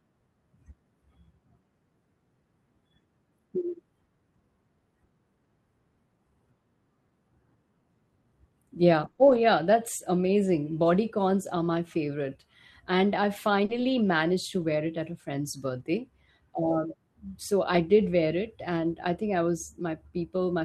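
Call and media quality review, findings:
Lost packet rebuilt from error correction. Symptom: brief rough, noisy patches in the speech, with no gap. Times: 9.03–9.09 s, 9.19–9.37 s, 13.69–13.99 s, 14.61 s, 15.79 s, 17.73–17.79 s, 19.01 s. Component: network path into the Opus decoder. Mechanism: packets lost, and the decoder played the low-bitrate copies carried in the packets that followed. Rebuilt spans run 20 to 160 ms. The longest fits eight separate 20 ms packets lost.

Short concealed packet loss. Symptom: short smear or wobble. Times: 9.11–9.19 s, as two back-to-back 20 ms holes, and 13.65–13.71 s, with 40 ms missing. Component: receiver jitter buffer and decoder concealment. Mechanism: audio arrived too late or not at all. The receiver extended the last sound to fill the hole, then blended back into real audio. Both spots border error-correction rebuilds, which points to burst loss around 9.1 s and 13.7 s.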